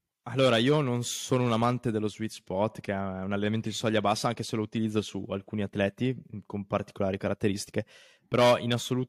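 Nothing in this speech clip stands out as a technical fault; it just runs along with no glitches to point at.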